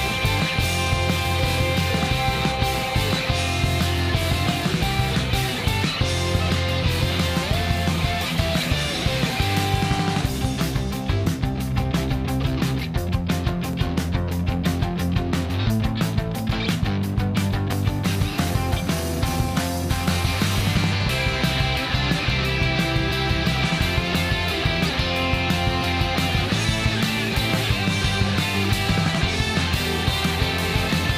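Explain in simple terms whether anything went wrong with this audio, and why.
Two loud pops break into the audio. The first, from 13.49 to 13.75 s, is a pair of fairly mild pops close together. The second, at 17.73 to 17.75 s, is a single sharp pop, much louder. Each is likely caused by a sudden electrical jolt, such as a plug, switch or static discharge. Unlike a dropout, the sound never stops. It keeps going underneath, and the pop sits on top.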